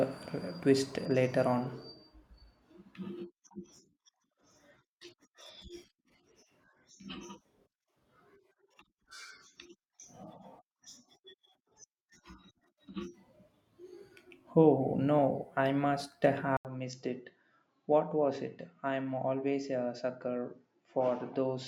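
At 16.57 s, just after "no I must", an 80 ms silence leads into narrower, duller speech, likely from the input switched to a poorer device. Nothing above 7.6 kHz survives, the level drops about 5 dB, and a faint new noise floor persists to the end.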